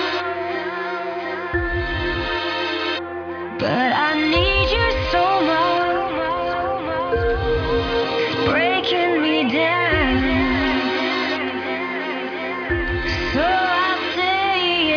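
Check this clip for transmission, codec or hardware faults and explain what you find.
Nothing stood out on listening to this clip.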